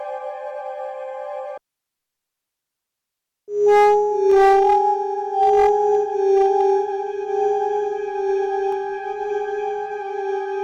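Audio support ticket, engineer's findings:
Hard clipping, three bursts: 3.68 to 4.78 s (about 7 dB over), 5.42 to 5.95 s (about 5 dB), 6.34 to 6.70 s (about 2 dB). Peaks cut flat at some gain stage or converter ceiling. Crackle on peaks, heaviest overload on the first.

Dropped samples: single sharp clicks at 4.32 s and 8.72 s. The waveform jumps where a tiny fraction of a millisecond of samples is missing, likely a buffer hiccup somewhere in the chain. Too brief to lose any sound, just the tick.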